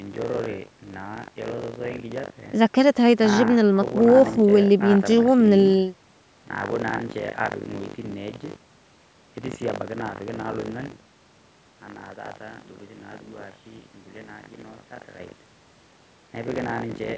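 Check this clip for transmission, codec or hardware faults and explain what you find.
There's one real fault here, buffer tearing, running the whole way through the speech. Writer and reader have slipped, so about a fifth of each period replays audio roughly 70 ms old, giving a robotic 50 Hz rattle whenever there's signal. The missing top above 8 kHz is just the call microphone processing.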